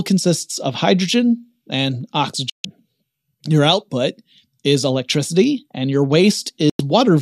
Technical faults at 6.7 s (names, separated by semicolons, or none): digital broadcast dropout